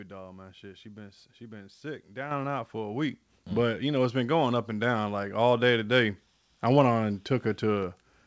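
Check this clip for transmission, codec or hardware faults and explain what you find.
The microphone volume stepped up twice, at 2.31 s and 3.33 s. Automatic gain control raised the input level in single jumps, about 7 dB after "been she been sick" and about 3 dB more after "out for a week". Voice and background suddenly grow louder together. The WebRTC call path, with nothing above 8 kHz, fits a G.722 link.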